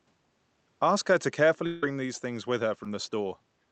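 From 1.66 to 1.83 s the sound stretches into a fading buzz-like continuation for about 0.17 s with no gap of true silence, then returns with that stretch missing. The likely cause is a long network dropout, where the receiver kept extending the last sound until audio arrived again.

At 2.84 to 2.86 s there is a brief smear, a tiny wobble lasting only a couple of hundredths of a second. It is short concealed packet loss. About 10 ms of audio missed the decoder, and the gap was filled by continuing the preceding sound before blending back. Both repairs sit within Opus coding limited to 8 kHz.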